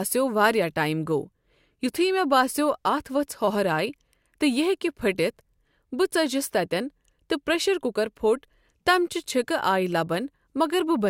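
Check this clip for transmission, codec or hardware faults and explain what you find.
No faults can be heard anywhere in the speech.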